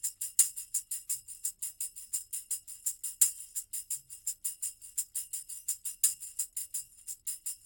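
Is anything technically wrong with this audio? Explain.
No, there are no technical faults to point out.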